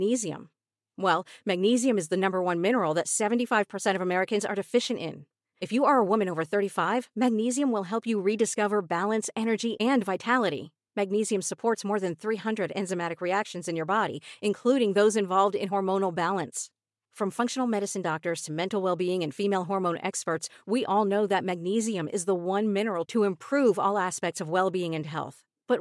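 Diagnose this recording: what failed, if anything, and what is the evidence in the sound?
Nothing in the speech stood out on listening, so there is no failure to trace to any stage.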